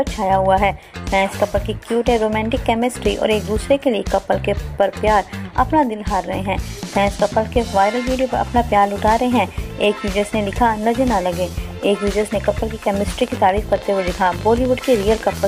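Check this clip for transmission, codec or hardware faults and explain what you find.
There's one fault near the end: a train of clicks from 13.21 s to 15.44 s. Around forty pulses arrive unevenly at about 15 per second, peaking roughly 5 dB above the audio, heard as ragged ticking throughout, gaps included. It's likely interference or a faulty connection or power supply.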